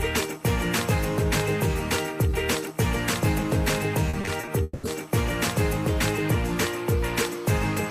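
From 4.09 to 4.85 s the audio breaks up with repeated packet loss (robotic sound). The gaps come in quick succession and are patched by extending the preceding sound, so about 320 ms is concealed, the longest gap lasting 200 ms. The result is choppy, with pieces missing.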